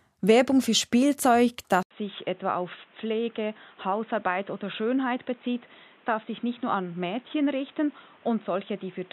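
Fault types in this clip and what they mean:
Input switched to a poorer device: At 1.83 s an 80 ms gap appears. The speech then turns dull, nothing above 3.8 kHz, about 5 dB quieter, with new background noise. This was likely a device change.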